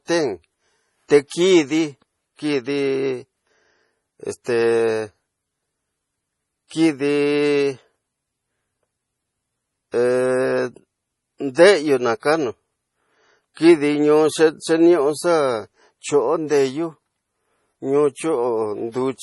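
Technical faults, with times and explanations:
Throughout: MP3 compression, likely at a low bitrate near 32 kbps. Nothing remains above 11.4 kHz, so the speech sounds dull. The damage is heavy. Weak frequency lines drop in and out between frames. This gives a watery, swirly texture and smeared attacks.
4.44–4.46 s, 9.92–9.94 s and 11.55–11.57 s: pre-echo. Each time, a hiss of about 20 ms comes just before a sharp onset. The last one sits just before "xa kanu". The codec spreads noise sized for the loud attack across its whole block, so the noise fills the quiet moment before it.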